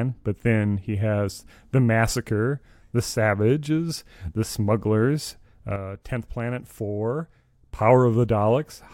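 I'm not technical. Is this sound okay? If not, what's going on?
No. At 5.76 seconds the speech suddenly drops to a noticeably quieter level, and it snaps back at 7.79 seconds. This is a sudden gain jump. The change happens instantly, not as a gradual fade, and the background hiss drops and returns at exactly the same moments. A speaker turning away would lower only the speech. The likely cause is a volume setting being switched abruptly during processing, with no smooth transition.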